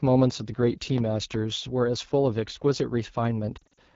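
Throughout, the AMR wideband (HD Voice) codec runs at a low mode, which fits 8.85 kbit/s, so its pulse-driven model leaves the speech plainly rough and raspy. From 3.57 to 3.78 s, lost AMR speech frames, about 140 ms scattered over 220 ms in runs up to 40 ms, force concealment, producing brief dips and warbles.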